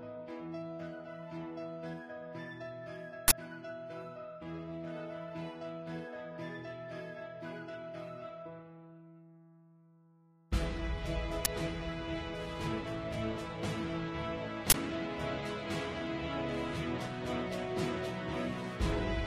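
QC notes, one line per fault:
3.28–3.32 s, uninitialised buffer: a 40 ms output block went to playback before any audio had been written into it, so leftover memory contents were read out as sample values, producing a short, loud burst of harsh digital noise.
11.45 s, uninitialised buffer: the same failure on a 10 ms block, heard as a brief, loud crack.
14.7–14.74 s, uninitialised buffer: another unfilled 40 ms block, again a loud noise burst cutting across the sound.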